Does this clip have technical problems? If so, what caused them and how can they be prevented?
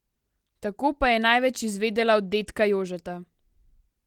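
No, nothing in this speech clip points to a technical fault. The Opus voice coding is audible only as light coding texture across a full band reaching about 20.4 kHz, which fits hybrid mode at around 24 kbps.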